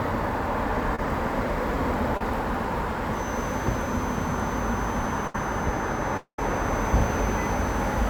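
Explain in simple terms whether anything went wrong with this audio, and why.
A few things went wrong along the way, all of them network or room problems rather than anything in the original sound.

At 0.95 to 0.99 s and again at 2.17 to 2.21 s there's short concealed packet loss. About 30 ms of audio didn't arrive in time each time, so the receiver stretched the last bit of sound to cover the hole. You hear it as a quick smear or wobble.

From 3.07 s right to the end there's a feedback whistle, a thin steady tone around 6.1 kHz sitting quietly behind everything and slowly swelling and fading. It's likely a loudspeaker-to-microphone loop hovering just at the edge of howling without actually taking off.

At 5.27 to 5.35 s there's a burst of packet loss, roughly 70 ms gone in one go. The receiver kept the previous sound going and faded it, so you get a short held buzz or hiss, then the audio picks up a bit further on.

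From 6.17 to 6.39 s comes a longer gap, likely a long network dropout. About 210 ms never arrived. The fill-in fades out and the last 90 ms or so is just silence before the sound jumps back in with that chunk missing.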